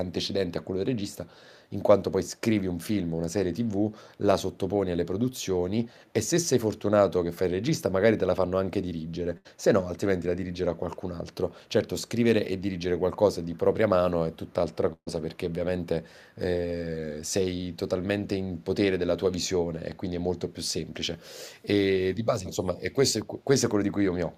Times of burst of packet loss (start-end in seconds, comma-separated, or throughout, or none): 9.37-9.47, 14.93-15.08